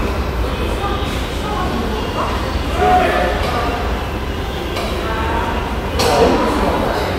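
No technical faults can be heard anywhere in this recording of sounds.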